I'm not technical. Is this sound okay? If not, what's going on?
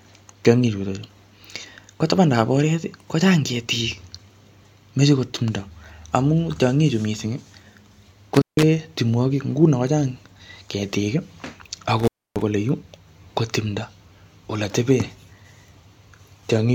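No. There is an intermittent contact at 8.35 to 8.63 s and again at 11.99 to 12.42 s. A loose cable or plug briefly loses connection, so the speech drops out for about 0.16 s and then 0.28 s, with crackle where it breaks and reconnects.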